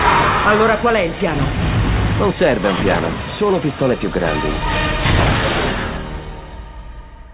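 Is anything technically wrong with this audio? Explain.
No, nothing is technically wrong with this audio.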